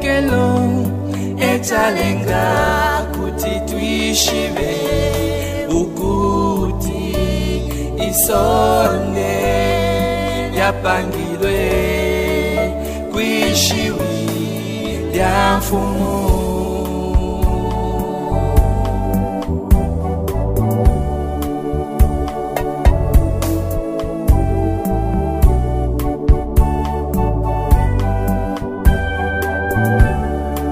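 No technical faults can be heard anywhere in the clip, so there is nothing to describe in time order.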